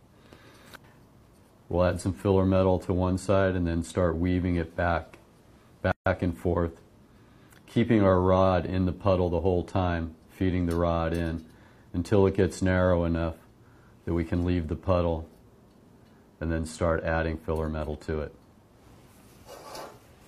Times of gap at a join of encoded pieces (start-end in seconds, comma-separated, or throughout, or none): 5.92-6.06